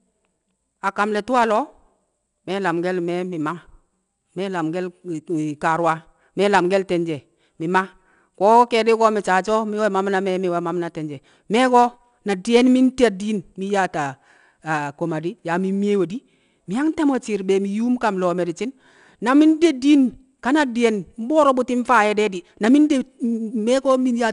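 Throughout, 4-bit ADPCM compression adds a gritty hiss that swells and fades with every loud syllable, unlike steady background noise. Nothing remains above 10.7 kHz.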